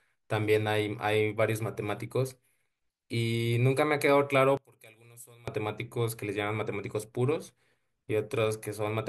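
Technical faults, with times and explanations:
4.57–5.48 s, one channel inverted: likely a polarity flip on one channel, so the centred speech cancels when summed, falling about 25 dB to a faint residue.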